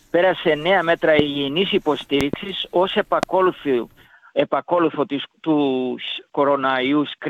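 Loud pops strike at 1.19–1.22 s, as a double pop at 2.21–2.36 s, and at 3.23–3.25 s, the last strongest, roughly 20 dB above the sound rather than 15. These are likely voltage spikes from a switch, plug or static, riding over the continuing sound. They appear as tall waveform spikes and full-height vertical lines on a spectrogram.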